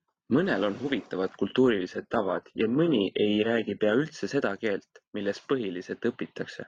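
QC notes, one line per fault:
1.94–3.94 s, adaptive stream at a lower bitrate: right after "on huvitavad" the speech suddenly goes dull and a bit synthetic, with nothing above 9.4 kHz and a swirly codec texture. It snaps back at "üldse seda keelt milles" with no gap either side. That's the player switching down to a lower-quality rendition for two seconds while the connection struggled. It sounds like a very low-bitrate HE-AAC-style stream, roughly 12 kbit/s, rebuilding the top end rather than carrying it.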